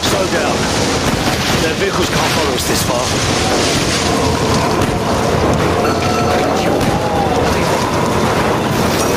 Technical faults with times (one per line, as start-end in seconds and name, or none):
0.00-9.16 gain pumping